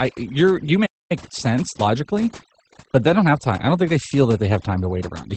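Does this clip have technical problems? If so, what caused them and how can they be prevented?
Yes. Overdone noise removal runs through the whole speech clip. The background sinks to near silence with twinkling specks. A noise suppressor set too strong is cutting bands near its noise estimate, and quiet parts of speech go too. Use a gentler reduction setting.

Opus voice compression is also present throughout. Nothing is heard above about 8.6 kHz. The speech is plainly muffled, hoarse and slightly robotic. This fits the SILK voice coder at a low rate, around 12 kbps in wideband mode, coding the excitation coarsely. Raise the bitrate to avoid it.

A playback stall occurs from 0.85 to 1.12 s, between "you're you" and "sense logically but they". The sound stops mid-flow for about 0.24 s, then resumes. The player likely ran out of data or had its thread blocked. Use a larger playback buffer.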